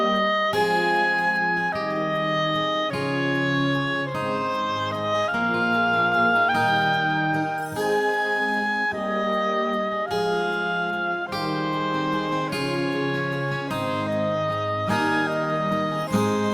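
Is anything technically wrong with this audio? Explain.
No, there's nothing technically wrong here that I can hear, so there's nothing to flag.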